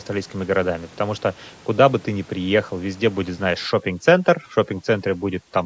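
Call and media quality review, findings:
Overdone noise removal, 3.66 s to end. Background drops, breaks up into twinkling specks. Suppressor set too strong, zeroing bands near its noise estimate, taking quiet speech detail with them. Spectrogram: scattered isolated bins, gaps in faint harmonics.

Room noise before 3.66 s sits about 25 dB below speech; call microphone processing limits content to below 8 kHz.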